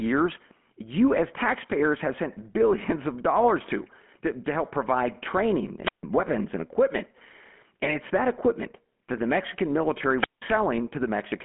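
Throughout, the speech carries the buzzy, gravelly texture of the GSM full-rate codec. The vocal tract is modelled and driven by a sparse, regular pulse excitation, which leaves a rasping roughness, consistent with a 13 kbps coder. The band is squeezed to a telephone line of roughly 200 Hz to 3.4 kHz. A spectrogram shows nothing above 3.8 kHz, a flat ceiling across the whole clip, and grainy, smeared harmonics below it.

From 5.82 to 6.03 s, just after "to help provide training", a wireless microphone squelch dropout occurs. The FM radio link fades, hiss briefly rises, and the receiver's squelch mutes the output for about 149 ms before the speech resumes with "weapons and equipment". A second dropout runs from 10.15 to 10.44 s, with a mute of about 181 ms. In the waveform each shows as a short burst of noise followed by a flat, near-zero gap. In the spectrogram each is a brief broadband haze and then a blank vertical strip.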